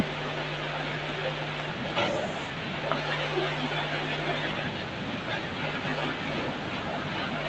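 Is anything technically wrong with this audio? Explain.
Yes. From 1.95 to 2.34 s there is an echo leak: a copy of the speech trailing by about 240 ms and about 5 dB louder than the original, likely a far-end echo canceller missing loudspeaker pickup. Unlike room reverb, it's a distinct repeat rather than a smooth tail.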